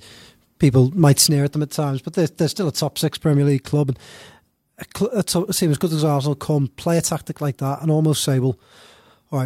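At 1.27 s one channel likely drops out, and it stays lost to the end at 9.45 s. In the mono sum the speech falls abruptly by about 6 dB and stays quieter, and anything carried only by the missing channel disappears.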